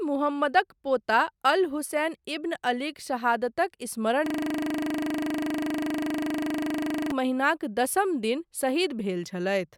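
A speech clip with a system hang loop from 4.26 s to 7.11 s. The playback froze and the hardware kept replaying the same 40 ms of audio 71 times, which points to a ring buffer about 40 ms long. At 25 repeats per second this is heard as a rough, buzzy stutter. A waveform shows one identical short segment tiled exactly, and a spectrogram shows evenly spaced vertical striations with comb-like harmonics every 25 Hz.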